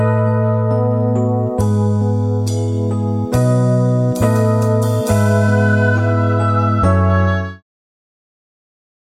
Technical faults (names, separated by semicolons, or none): none